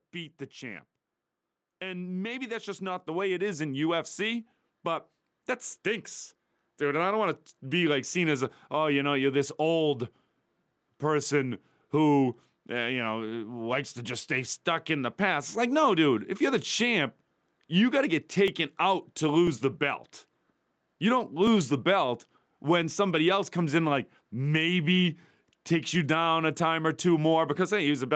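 From 0.12 s to 7.9 s, the speech and the background noise swell together by about 10 dB, levelling off just before "seen as a oh". This is automatic gain rising: the gain control judged the input too quiet and kept turning it up.

After "if you're the champ", from 17.48 s to 22.47 s, small ticks arrive once every second, about seven in all, before "when somebody else comes". These are periodic USB or driver dropouts: roughly a millisecond of audio is skipped each time the bus or driver stalls.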